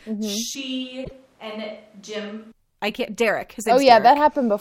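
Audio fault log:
0.55–2.52 s, switch to a distant microphone: sound suddenly goes roomy, hollow and thin, about 5 dB quieter, with room noise around 30 dB down. Likely the close mic dropped out and a far one took over.
1.01–1.12 s, damaged data in a compressed stream: a short glitch, as the decoder hits corrupt frames, loses sync and hunts for the next header.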